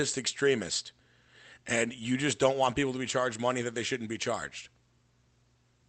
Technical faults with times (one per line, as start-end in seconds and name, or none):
none